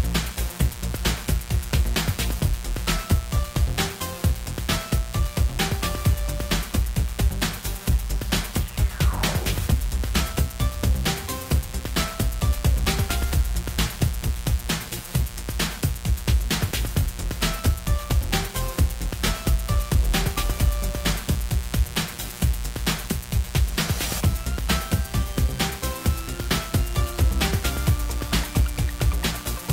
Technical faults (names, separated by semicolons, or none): mains buzz